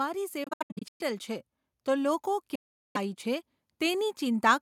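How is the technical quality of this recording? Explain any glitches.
The recording is marred by two stretches of broken-up audio and a slow swell in level during the second half of the speech.

From 0.44 to 1.01 s, the speech cuts in and out in short gaps totalling about 370 ms, the longest about 0.12 s. From 2.55 to 2.97 s, about 390 ms goes missing. Each time the speech picks up further along, as though it kept playing underneath. This is likely a Bluetooth dropout: packets reached the headphones too late and were discarded.

From 1.85 to 4.5 s, the speech and its background grow louder together, by about 4 dB. This is automatic gain rising: the gain control judged the input too quiet and raised its gain gradually over these seconds.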